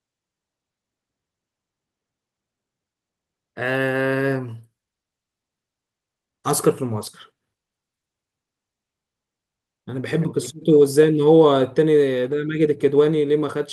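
No technical faults can be heard anywhere in the recording.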